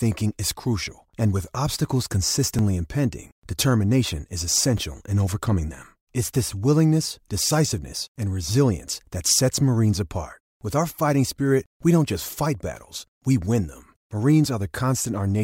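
Speech with two repeated-buffer faults, where new audio arrived late and the device replayed its last block, a block of about 5 ms by the repeat length. At 2.59 s, just before "impending determination is", one block plays twice. At 4.78 s, before "in overcoming them", it plays three times. Each is heard as a click or tiny buzz. A waveform shows identical 5 ms segments butted together with abrupt steps, and a spectrogram shows thin vertical broadband stripes.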